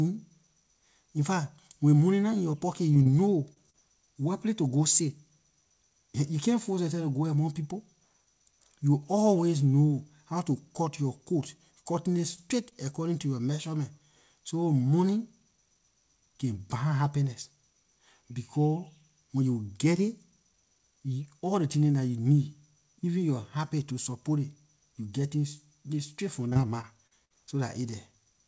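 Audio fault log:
2.94 to 12.73 s, short concealed packet loss: small pieces of the call arrived too late for the decoder, each about 20 ms, at 2.94, 3.03, 3.53, 3.66, 3.70 (40 ms, right before "wherplay to go sit"), 12.36 and 12.69 s (just before "according to yor measurement"). The first comes right after "nah in yor pocket". The receiver stretched the preceding sound over each hole and faded back into real audio, so each spot sounds like a brief smear or wobble, clustered around 3 s.
26.49 to 27.32 s, repeated packet loss (robotic sound): five gaps, the longest about 53 ms, came in quick succession, so about 160 ms of speech went missing over this stretch. Each hole was patched by extending the last sound before the next loss arrived, and about 18% of the span is synthetic. The result is choppy speech with pieces gone, heard over the band-limited G.722 call audio that stops at 8 kHz.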